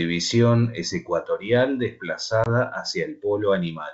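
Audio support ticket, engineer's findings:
Packet loss on the ADPCM call, about one packet: hard-edged 20 ms silent gap at 2.44–2.48 s. The decoder's predictor and step size fall out of sync, so speech re-enters briefly distorted.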